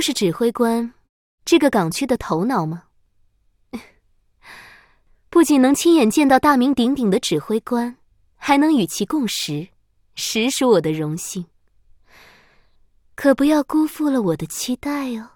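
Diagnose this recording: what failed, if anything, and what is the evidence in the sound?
Nothing failed at any stage of the chain, and the sound gives no evidence of a fault anywhere in the recording.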